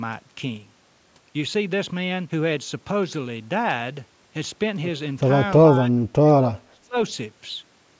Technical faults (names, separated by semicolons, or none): speech suppressed in double talk